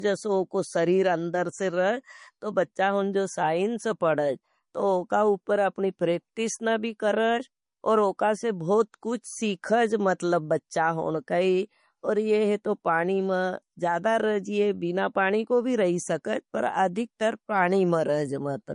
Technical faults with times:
0.00-18.74 low-bitrate audio saved at a high bitrate

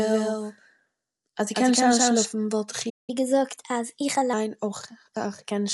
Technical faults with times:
0.00-5.74 Dolby Digital compression
0.00-2.26 doubled audio track
2.89-3.10 playback stall
3.10-4.33 catch-up at higher speed

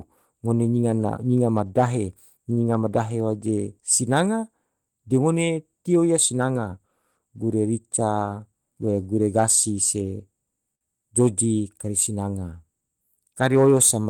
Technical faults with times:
2.53-2.60 short stall from a late packet
10.75-10.84 short stall from a late packet

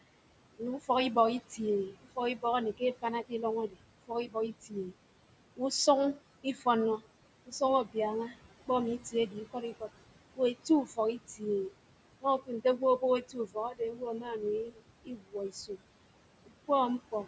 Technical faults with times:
0.00-17.28 noise suppressor artifacts
0.58-4.93 speech cut by the noise suppressor
6.14-15.82 speech cut by the noise suppressor
16.46-17.27 speech cut by the noise suppressor

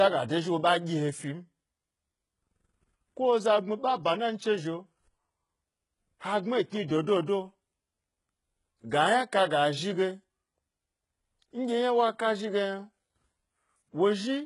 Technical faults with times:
0.00-14.46 HE-AAC compression

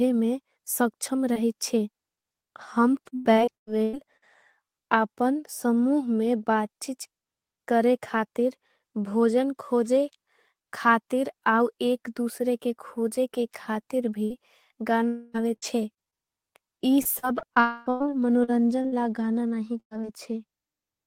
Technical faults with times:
1.33-4.24 repeated packet loss (robotic sound)
15.08-15.36 long network dropout
15.56-20.05 repeated packet loss (robotic sound)
17.60-17.88 long network dropout

